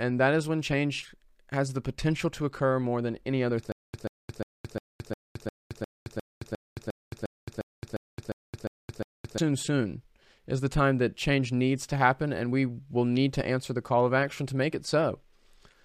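A stutter with silent gaps runs from 3.72 to 9.38 s, and it likely comes from the player or stream stalling and replaying its last fragment at each retry. The same 135 ms burst of speech returns 16 times, each followed by about 219 ms of dead digital silence, giving an even 354 ms cycle. Whatever speech should have filled those 5.7 seconds never plays and is lost.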